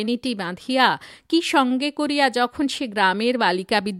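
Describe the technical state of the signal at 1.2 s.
At 1.2 s the speech signal is intact, with no audible fault at that moment.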